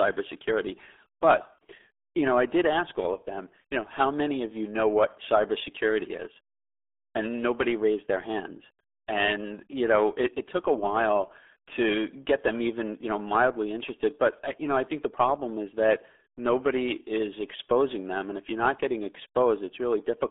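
Muffled, gargly speech runs through the whole clip, with a hollow, bubbling texture on every syllable and no air or sibilant sparkle, because nothing above about 3.7 kHz gets through and the low end is thinned below roughly 300 Hz. That narrow phone-line band and the heavy smearing point to the RealAudio 14.4 codec, the old RealAudio 1 dial-up format, whose crude coding at a rate that fits 8 kbit/s strips detail and leaves this gargly, underwater quality.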